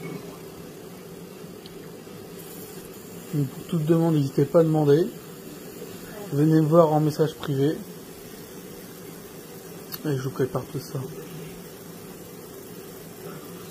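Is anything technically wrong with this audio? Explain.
No, nothing is technically wrong with this audio.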